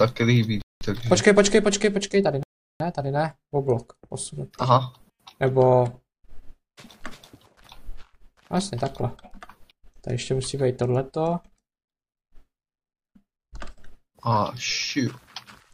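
At 0.62 s the sound drops to silence for about 193 ms, then again at 2.43 s for 370 ms: a likely Bluetooth stall, with the buffer running dry.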